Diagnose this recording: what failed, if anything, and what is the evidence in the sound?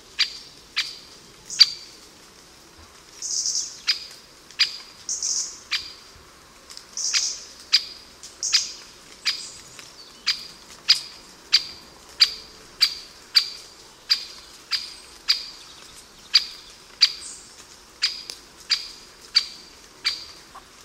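Nothing in the signal chain has failed: the audio holds steady and continuous, with no dropouts, discontinuities or level disturbances anywhere.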